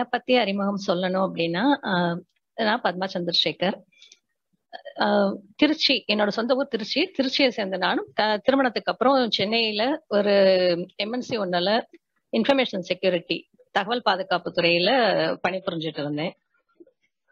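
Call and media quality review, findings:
Adaptive stream at a lower bitrate, 14.44–17.31 s: sudden dulling, nothing above 6.9 kHz, more codec artefacts. Fits a lower-bitrate AAC rendition. Unlike a rebuffer, no gap.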